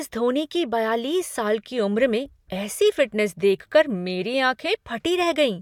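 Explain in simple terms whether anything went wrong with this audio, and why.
Nothing went wrong here.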